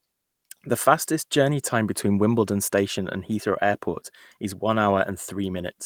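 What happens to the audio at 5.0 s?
Nothing goes wrong at 5.0 s; the speech runs through that moment intact, with no dropout, click or distortion.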